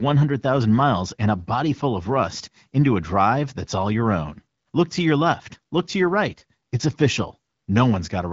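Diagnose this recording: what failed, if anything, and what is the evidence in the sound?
Nothing failed: the speech carries the light coding texture of an AMR wideband (HD Voice) codec running at 12.65 kbit/s, with the band stopping near 7.4 kHz, which is that codec stage working as designed.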